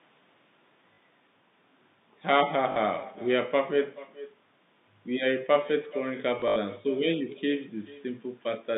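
From the start, the speech carries an echo with no canceller: the far end's loudspeaker feeds the talker back into its microphone, so every phrase returns roughly 400 ms later, about 19 dB quieter and thinner. A spectrogram shows faint, delayed ghost copies of each syllable's harmonics.

At 0.94 s and 2.72 s, 40 ms stretches show packet loss with the last packet repeated, which fits two 20 ms packets replayed each time. From 6.4 to 6.56 s, 100 ms of gaps, the longest 80 ms, produce a robotic stutter. The waveform shows identical repeated blocks, and the spectrogram shows vertical lines at each join, inside the 150 Hz to 3.7 kHz band of the G.711 line.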